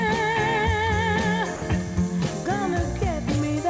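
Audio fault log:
1.56–1.62 s, sound dropped by the voice detector: for about 60 ms the sound vanishes and is replaced by a brief patch of steady, featureless hiss before the audio resumes. This is likely the sender's voice activity detector judging that stretch to be background and stopping transmission, with the receiver filling the 60 ms gap with comfort noise. The band-limited call path, with nothing above 8 kHz, fits a wideband codec such as G.722.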